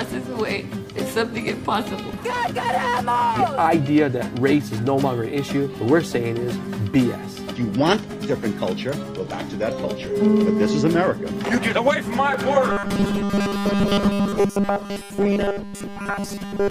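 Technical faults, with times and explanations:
7.83–9.49 s, drift correction step: here the whole sound lurches sharp in a single jump, running about 5.2% fast and up around 88 cents, just shy of a semitone, then drops straight back at 9.49 s. That's likely clock-matching software nudging the playback rate in one go to rebalance its buffer. Speed and pitch move together because it's really just playing faster, not pitch-shifting. So you get that brief detuned, hurried stretch.
12.70–16.70 s, robotic sound from repeated short buffers: from 12.70 s to the end, the audio collapses into a hard, metallic buzz pitched at 200 Hz, tracking the original only loosely. The cause is likely audio arriving too seldom, with the gaps patched by looping the last chunk over and over. A 200 Hz buzz means each repeat is 5 ms long. Roughly 70% of the material is repeats rather than new sound.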